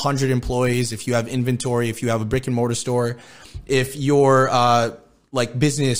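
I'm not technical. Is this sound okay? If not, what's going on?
Yes, this speech recording sounds fine, with nothing going wrong anywhere in it that you'd need to worry about.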